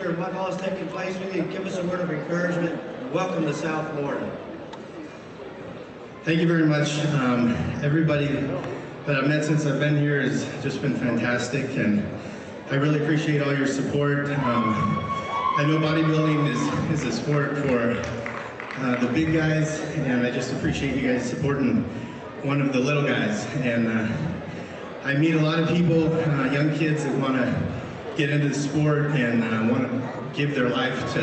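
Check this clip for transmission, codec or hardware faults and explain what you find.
No transmission, codec or hardware fault is audible; the top end stops near 8 kHz and the coding texture fits a normally working Opus call path at around 64 kbps.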